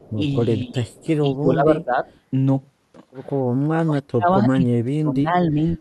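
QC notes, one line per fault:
0.00–0.11, 0.88–1.07 and 2.09–2.15 s, echo leak: a faint delayed copy of the speech trails it by 219 ms, about 30 to 35 dB down, in short scraps. The likely cause is a far-end loudspeaker echo the canceller didn't fully remove.
0.66–0.77, 1.33–2.05, 3.76–4.29, 4.53–5.35 and 5.51–5.58 s, speech suppressed in double talk: the speech dips, by about 15 dB early on and by up to about 40 dB at 3.76 and 4.53 s, with only a slight dip at 5.51 s. The likely cause is the canceller ducking the talker while both sides spoke at once.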